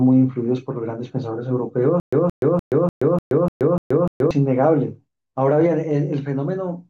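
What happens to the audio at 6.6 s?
Nothing goes wrong at 6.6 s; the speech there is intact and free of any audible fault.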